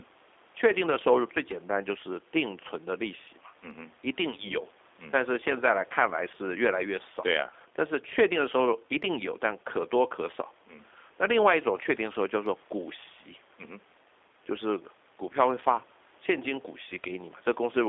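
Speech heard throughout through the G.729 codec, rough and faintly synthetic as each 10 ms frame is rebuilt from a few pulses, which fits an 8 kbit/s call link. A spectrogram shows energy confined to roughly 300 Hz to 3.6 kHz, empty above.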